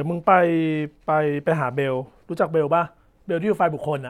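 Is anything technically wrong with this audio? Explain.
No, the speech signal shows no technical faults anywhere in the recording.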